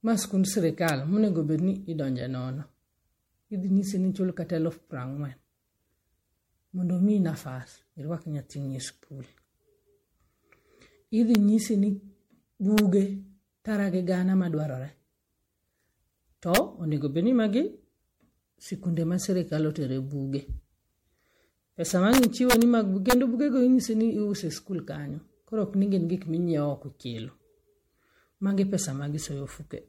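From the start, the whole speech track has a swirly, hollow smear, with transients dulled and nothing above 16.5 kHz. This is generation loss, likely from roughly seven successive MP3 passes at 64 kbit/s. Each re-encode requantises on a shifted frame grid, so the holes and noise compound. That is why it sounds more watery and blurred than a single 64 kbit/s encode would, rather than just band-limited.

Integer overflow then cuts in as hard cracks at 0.88 s, between "ma en sikund" and "monego bed". It recurs at 11.35 s and 12.78 s, at 16.55 to 16.57 s just before "onego bedni", as a longer burst from 22.13 to 22.62 s, and at 23.10 to 23.13 s before "bugego inyisi". Peaks pushed up to about 2 dB past full scale wrap to the opposite sign instead of flattening. Clipping would sound like fuzzy distortion, but these are violent full-range snaps.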